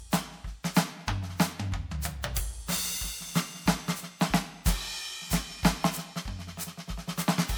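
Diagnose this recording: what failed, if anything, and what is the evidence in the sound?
The codec stage failed, and the fault is generation loss across the whole music clip. The sound is swirly and hollow from start to finish. Transients lose their edge and smear into each other. The damage is heavier than one MP3 pass at around 128 kbit/s would leave. The likely cause is several MP3 encode and decode cycles, perhaps four. Each pass re-quantises on a shifted frame grid. Noise and spectral gaps build up.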